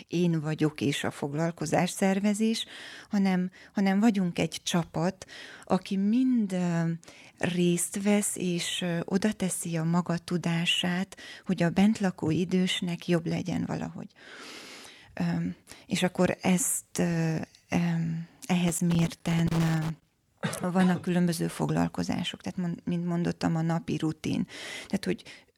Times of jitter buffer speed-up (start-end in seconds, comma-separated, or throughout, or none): none